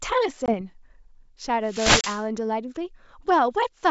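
A speech clip with two hard-edged silent gaps, at 0.46 to 0.54 s (about 20 ms of audio missing) and 2.01 to 2.05 s (about 30 ms). After each gap the speech comes back slightly distorted before settling. This is packet loss on an ADPCM call: a couple of packets, then a few, were dropped and filled with silence, and the decoder's predictor and step size fell out of step with the sender's. From 1.65 to 2.25 s a swish of static rises over the voice. That is a wireless microphone noise hit, where the FM radio link faded as reflections cancelled and receiver noise surfaced. The G.722 wideband coding is clear up to about 7 kHz, with at most a faint upper-band hiss.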